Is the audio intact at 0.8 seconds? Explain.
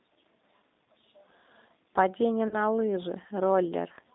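No. The whole clip carries G.729 codec coding, and the sound is band-limited to roughly 200 Hz to 3.7 kHz. Speech is rebuilt from a vocal-tract filter, pitch predictor and sparse pulses, which fits an 8 kbit/s codec and gives a plainly rough, synthetic texture. Just after, from 0.84 to 0.86 s, there is VoIP packet loss concealed by the speech codec. About 20 ms went missing, which fits two lost 10 ms frames. The decoder extended its last pitch and filter with falling gain, producing a brief, fading stretched patch.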